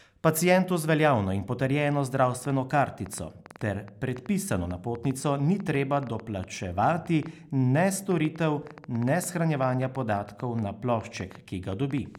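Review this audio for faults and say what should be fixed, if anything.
A train of clicks runs from 2.45 s to 12.16 s. Around fifty similar pops come unevenly spaced at about 6 per second, about 5 dB above the speech, even in pauses. Their repeated, much the same shape distinguishes them from random crackle. The likely cause is interference from nearby equipment. Keep other devices and their cables away from the audio interface.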